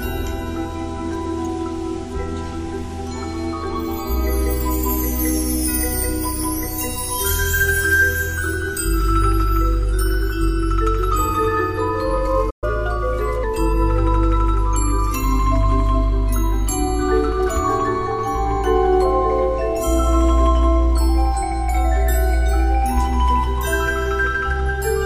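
At 12.50 s the sound halts mid-flow for 120 ms, a playback stall, likely from the player running short of data; unlike a brief dropout, it stops outright instead of clicking. From 12.64 to 13.44 s comes catch-up at higher speed: the backlog plays at 1.15 times normal rate, pitch raised about two semitones, then it settles. Tempo and pitch rise together, which sets it apart from a pure pitch shift.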